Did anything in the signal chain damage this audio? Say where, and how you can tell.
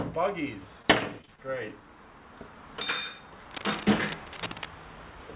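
Yes. Short concealed packet loss at 0.82, 1.21, 1.25 and 1.36 s: network stage. Each roughly 20 ms gap was papered over by extending the preceding sound, leaving brief smears.

Cable scratch noise from 3.50 to 4.67 s, about 10 dB below the signal: analogue wiring, likely a worn cable or connector whose shifting contact adds rough, uneven rustling bursts.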